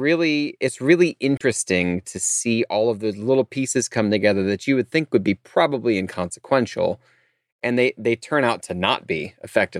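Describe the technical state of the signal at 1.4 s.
At 1.4 s the speech carries damaged data in a compressed stream, running from 1.37 to 1.42 s, about 44 ms, just after "it's really". Corrupted bytes there leave the decoder unable to read the frames properly, so it falls out of sync and hunts for the next valid frame header. The result is heard as a chirp, squawk, click or short hole in the speech.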